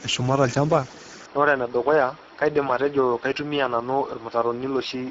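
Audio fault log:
throughout: Speex codec. The speech sounds hoarse and grainy, with a buzzy, noise-filled texture and no content above 7.7 kHz. Too few bits reach the CELP excitation, a shortfall consistent with a bitrate near 10 kbps, so fine vocal detail is replaced by coarse noise.
1.26 s to end: input switched to a poorer device. The sound turns duller and a few dB quieter, with nothing above 5.7 kHz and a new background hiss well beneath the speech, all with no gap at the change. The recording input likely moved to a narrower-band microphone.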